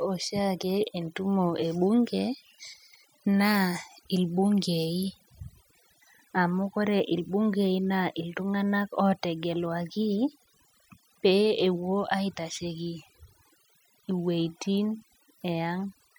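Throughout the speech, overdone noise removal is audible. The noise reduction was set too strong. Frequency bands near its noise estimate were pushed down or shut off. Quiet parts of the voice went too. The background drops and breaks up into twinkling specks.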